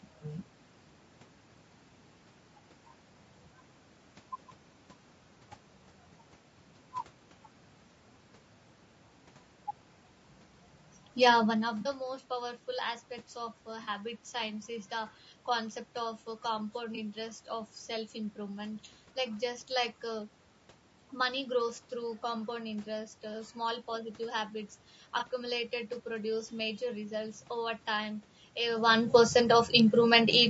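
Right from the start the whole clip has a rough, grainy edge, with noise sitting between the harmonics and a thin, slightly synthetic top end, most likely low-delay AAC compression (AAC-ELD) at a fairly low rate, something around 32 kbps by the sound of it. Its short frames resolve the pitch harmonics poorly.

On top of that come four brief dropouts, each an AAC frame loss with concealment: 11.81 to 11.87 s, 13.83 to 13.89 s just before "science is the concept", 16.95 to 16.98 s between "uh compound" and "interest of self improvement", and 25.19 to 25.23 s right after "uh small positive habits". The decoder papers over each 20 to 40 ms gap from the last good spectrum, so you hear a short smeared, noisy patch.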